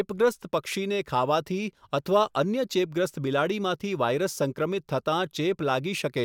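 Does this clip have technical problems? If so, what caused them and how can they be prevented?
No, nothing stood out as a technical problem on listening to this speech recording.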